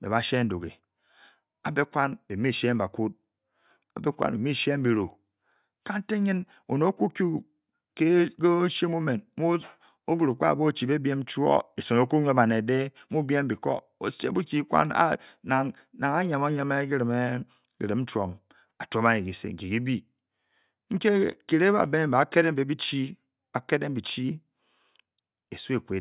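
No technical faults are audible.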